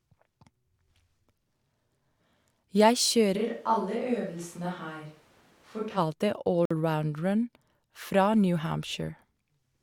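From 3.38 to 5.96 s the speech turns hollow and roomy, about 5 dB quieter, with background noise around 30 dB below, most likely a switch to a distant microphone. At 6.65 to 6.71 s a gap between stream segments inserts 52 ms of hard-edged silence, which fits a timestamp mismatch at a 4-second segment boundary.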